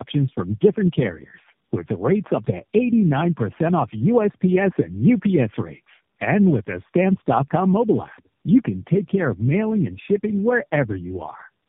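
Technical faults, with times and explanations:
Throughout: tandem speech coding. The speech has passed through three low-rate speech coders in succession, with the signal decoded and re-encoded at each link. The sound points to a chain of roughly G.729A-class coders at around 8 kbit/s, with a final AMR-NB stage, joined by 64 kbit/s G.711-type links. Each coder re-models the previous coder's errors as if they were speech, so roughness and warbling accumulate. The band also stops at 3.4 kHz, which makes the speech sound muffled.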